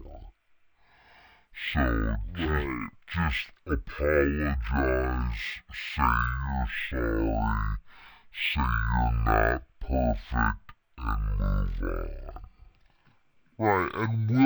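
From start to finish the speech plays as stereo read as mono: interleaved left and right samples are taken in sequence as one channel. Playback runs at 0.5x speed, a full octave (12 semitones) low, with a fainter mirrored copy folded into the upper spectrum.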